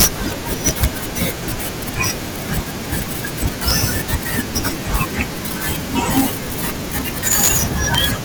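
Integer overflow cracks the speech at 0.00–0.06, 0.67–0.85, 3.68–3.71, 4.96, 6.17–6.20, 7.32–7.57 and 7.95–8.04 s. Peaks driven up to about 7 dB past full scale wrap to the opposite sign instead of limiting, producing violent snaps far harsher than clipping.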